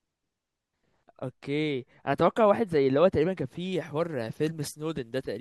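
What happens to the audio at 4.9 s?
At 4.9 s the speech has pre-emphasis left on, from 3.72 s to the end: an FM 75 µs treble boost, about 13 dB at 10 kHz, never de-emphasised, sounding thin, bright and sibilant.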